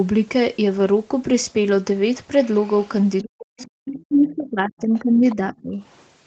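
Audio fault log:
3.22–3.29 s, 3.60–3.70 s, 4.29–4.36 s, 5.29–5.36 s, 5.91–6.03 s: other side's voice leaking through. Brief faint scraps of a second voice, around 20 to 40 dB under the main speech. They are likely loudspeaker echo that the echo canceller failed to remove from the microphone.
3.33–5.81 s: speech suppressed in double talk. The talker's speech repeatedly dips and drops out, at its deepest by about 40 dB, for around two seconds in total. This is likely the echo canceller turning everything down while both sides spoke at once.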